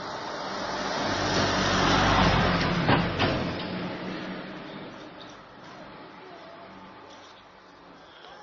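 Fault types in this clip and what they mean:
Transcoding between lossy codecs: Nothing is heard above about 6.8 kHz for the whole clip, so the sounds are dull and lack air. Two kinds of coding damage are audible together, the artefacts of one codec layered over those of the other. The likely cause is a chain of low-bitrate coding, consistent with MP3 followed by Opus, each around 24 kbit/s. The second codec spent its bits re-encoding the first codec's damage, and the lowest cut-off remained.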